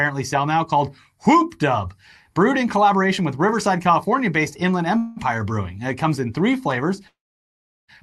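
Speech carried over a call path with its top end cut at 12 kHz stalls twice: a brief buzzy smear from 4.97 to 5.19 s, then a fading hold at 7.07 s that drops to silence until 7.90 s. Each is a call audio freeze, likely the jitter buffer running dry, with speech resuming intact but later.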